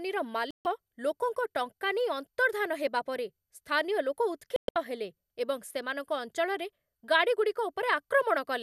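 At 0.51 s the speech cuts out until 0.66 s, a digital broadcast dropout. The receiver muted after frames failed. About 144 ms is lost. At 4.56 s it recurs, as broken holes over 0.2 s, the longest 120 ms.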